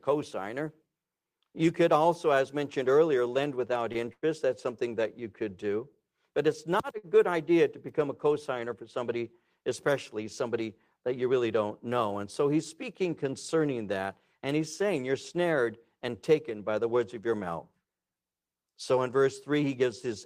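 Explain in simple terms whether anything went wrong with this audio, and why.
A short stall from a late packet happens at 3.92 to 3.98 s and again at 6.98 to 7.06 s. A piece of audio arrived late, so the player held the last sound for about 25 ms and then 52 ms. Nothing is lost, but it briefly drags.

A burst of packet loss follows at 4.13 to 4.25 s. Several pieces never arrived in time, so the player stretched and faded the last sound for about 93 ms, then jumped ahead, skipping roughly 60 ms of audio.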